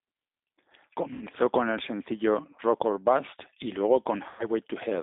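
Throughout the speech, the G.729 codec damage is plainly audible. The line is confined to roughly 200 Hz to 3.7 kHz, and the voice has the slightly rough, synthetic grain of a low-rate model-based coder, which fits 8 kbit/s G.729A. The decoder is rebuilding the speech from a vocal tract filter, a pitch predictor and a handful of pulses per frame rather than sending the waveform itself, so fine detail is lost.

VoIP packet loss concealed by the speech codec occurs twice. From 1.13 to 1.24 s, just before "con el sencillo", about 80 ms of audio is missing, which fits four lost packets. From 4.29 to 4.49 s, about 100 ms is missing, consistent with five lost packets. In each gap the decoder repeats its last pitch and filter at falling gain, producing a stretched, buzzy tone or coloured noise that fades. The following speech returns weak or distorted while the decoder's frame-to-frame state recovers.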